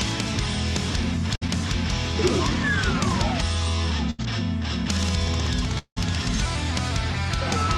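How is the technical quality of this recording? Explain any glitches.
There are three network-related glitches, two short and one longer, each leaving a brief hole where the audio jumps ahead.

At 1.35–1.43 s and 4.10–4.20 s there's a burst of packet loss. The receiver stretched the last bit of sound into a fading buzz or hiss, about 60 ms and then about 80 ms, and the audio picks up past the missing stretch.

At 5.78–5.98 s the sound smears into a fading tail lasting roughly a fifth of a second, dips to near-quiet for a moment, and then jumps ahead with about 180 ms gone. This is likely a long network dropout.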